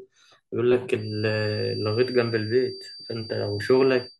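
From 0.92 s until the end of the speech, a feedback whistle sits behind the sound: a thin, steady tone at 4.6 kHz, roughly 15 dB below the speech and swelling and fading slowly in level. The likely cause is a loudspeaker-to-microphone loop held right at the edge of feedback. Unlike a runaway howl, it never builds up. The slow level swell separates it from a fixed electrical whine.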